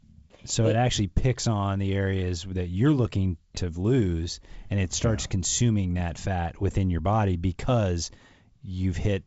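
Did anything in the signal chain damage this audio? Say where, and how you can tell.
No, nothing in the chain damaged this speech.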